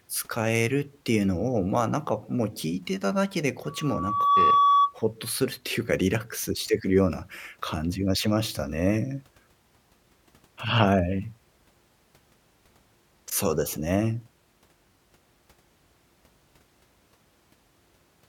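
A microphone picked up its own loudspeaker, and at 1.1 kHz the loop gain passed one, causing loudspeaker feedback squeal from 3.67 to 4.96 s. The pure tone swells over roughly 0.7 s to about 10 dB above the speech.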